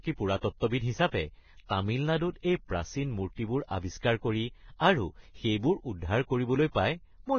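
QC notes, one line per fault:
Throughout, Vorbis compression: nothing is heard above 6.6 kHz, and the treble below it is hissy and grainy, its fine detail coarsely quantised into noise, likely from a Vorbis encode near 18 kbps. Unlike a simple low-pass, the speech below the cut-off is roughened too.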